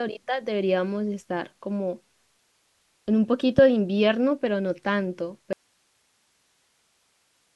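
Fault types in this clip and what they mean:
Loud pop: at 3.58 to 3.61 s, a single sharp pop peaks about 15 dB above the speech, likely a voltage spike from a plug, switch or static.
Audio dropout to a faint residue: from 5.53 s to the end, the speech cuts out abruptly, leaving only hiss about 45 dB down, likely a lost signal feeding a still-live path.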